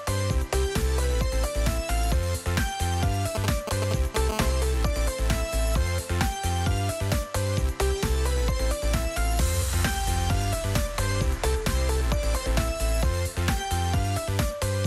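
From 3.35 to 4.31 s, a nearby 2G handset exchanging control traffic with its network sends short groups of radio bursts that the audio circuitry rectifies. These GSM signalling bursts come through as a galloping dit-dit-dit of brief 217 Hz buzzes, nearly as loud as the wanted sound.

From 4.32 to 6.17 s, the phone transmits continuously, as during a call, pulsing 217 times a second, and the rectified pulses become GSM phone buzz. This is a steady, hard, raspy 217 Hz tone rich in harmonics, about 17 dB below the signal and unrelated to it.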